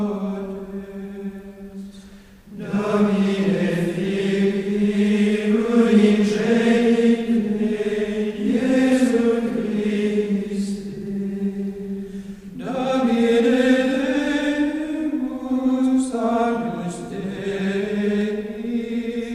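At 8.92 s, 11.07 s and 18.21 s the sound carries a single sharp click, each most likely caused by dropped samples: a tiny fraction of a millisecond of the stream goes missing, so the waveform leaps straight from one value to a later one. Nothing audible is lost, but the step itself snaps. On a waveform each appears as an abrupt discontinuity; on a spectrogram, as a thin vertical line running across all frequencies.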